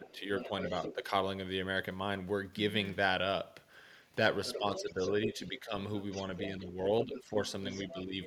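Right from the start, 0.03 to 0.94 s, there's the other side's voice leaking through: a second voice sits roughly 10 dB under the talker. That's likely an echo canceller not fully removing the far end from the loudspeaker. Overlapping it, 0.0 to 1.12 s, is speech suppressed in double talk. The talker dips by about 5 dB in patches adding up to under half a second, likely since the canceller ducks everything when both sides speak at once.

The same pair comes back harder later. The leak returns from 4.45 to 6.5 s, and while it runs, between 4.58 and 5.73 s, the talker drops by about 10 dB for well over half a second in total. From 6.48 to 8.15 s there's another suppressed stretch of similar depth, again around 10 dB. The far-end voice creeps back in at 7.04 s and stays, about 10 dB down, right through to the end of the clip.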